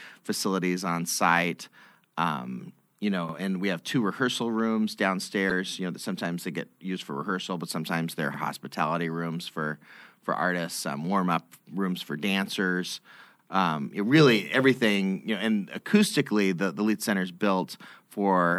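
At 3.29 to 3.34 s the speech stutters briefly. This is overlapping chunks: each 5-second chunk begins 50 ms before the previous one ended, so that slice plays twice. The same click-like repeat returns at 8.34 to 8.39 s and 13.39 to 13.44 s.

At 5.47 to 5.52 s a short glitch cuts in. This is damaged data in a compressed stream. Corrupt bytes made the decoder lose sync and hunt for the next valid frame. The result is a brief blip.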